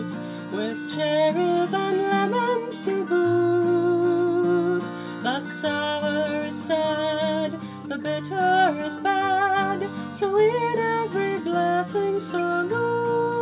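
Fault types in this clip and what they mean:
No technical faults can be heard anywhere in this audio. There is nothing to list for this clip.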